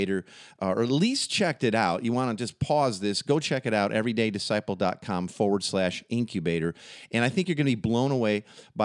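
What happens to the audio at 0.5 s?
Nothing goes wrong at 0.5 s; the speech plays through that moment intact, with no dropout, click or distortion.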